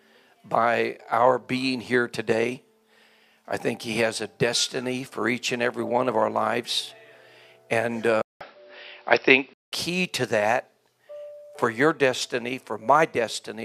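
At 8.22 s the sound drops out for 188 ms, then returns duller and boxier, with nothing above 5.7 kHz, a level shift of roughly 5 dB and faint new background noise, until 9.72 s. The input likely switched to a poorer device with a narrower band.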